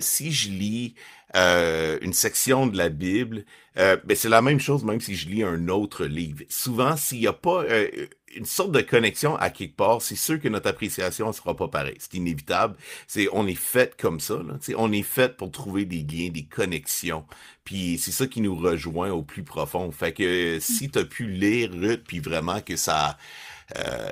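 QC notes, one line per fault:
Nothing stood out on listening to the speech.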